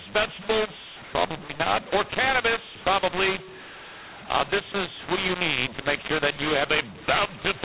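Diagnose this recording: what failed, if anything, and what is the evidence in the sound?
Codec stage: mu-law and A-law mixed up, mu-law bytes decoded as A-law. Levels scramble, so the speech is harsh throughout and pauses fill with noise.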